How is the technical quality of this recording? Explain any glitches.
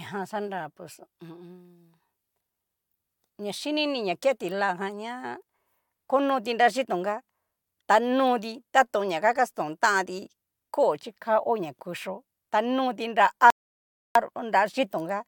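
A rebuffering stall interrupts the speech from 13.50 to 14.15 s, just after "ta noti nra". Playback ran out of downloaded audio and paused until more arrived, so the sound drops to silence for 0.65 s, then resumes exactly where it stopped, with nothing missing.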